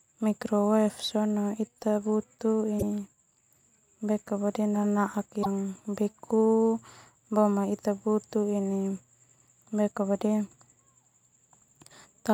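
At 2.76 s the speech is broken by a brief glitch lasting about 70 ms, and the same thing happens again at 5.40 s for another 70 ms. Both are damaged data in a compressed stream: corrupted bytes lead the decoder to misread its frames and lose sync, so it hunts for the next valid frame header. On a spectrogram each event shows as a short disturbance.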